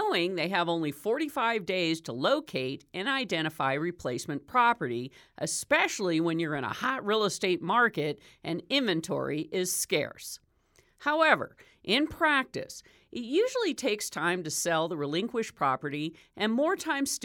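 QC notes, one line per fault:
No technical faults were found in the signal at any point in the recording.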